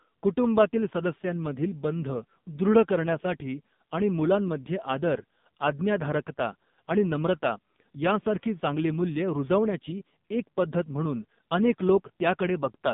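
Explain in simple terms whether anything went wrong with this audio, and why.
Throughout, the speech has gone through an AMR narrowband mobile codec. Unlike a simple muffled filter, it sounds buzzy and synthetic, with nothing above 3.7 kHz.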